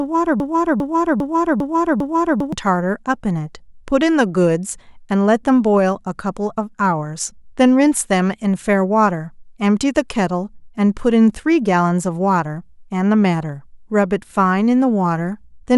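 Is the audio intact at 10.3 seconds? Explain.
Yes, the speech at 10.3 seconds plays through cleanly, with no dropout, click, distortion or other fault at that moment.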